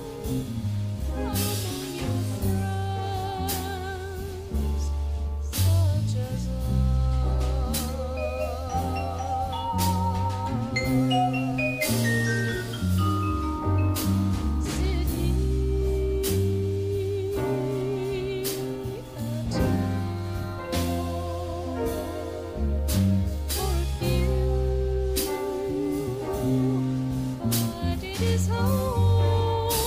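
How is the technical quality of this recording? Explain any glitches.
No glitches can be heard anywhere in the recording. The technical quality holds steady throughout, with nothing breaking into the sound at any point.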